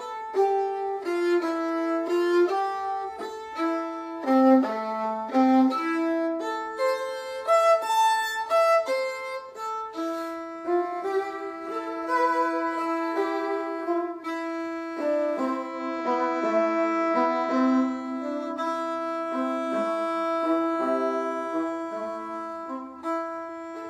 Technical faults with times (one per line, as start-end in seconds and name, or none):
15.52-18.17 digital radio blending to analogue